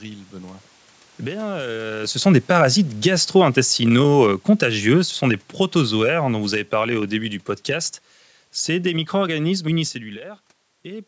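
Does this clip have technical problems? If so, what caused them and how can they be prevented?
Yes. Automatic gain falling from 3.58 to 7.1 s pulls the speech and its background down together by about 6 dB, as the gain control reacts to an input it judges too loud or too noisy. Lowering the microphone input level, or disabling automatic gain control, would prevent it.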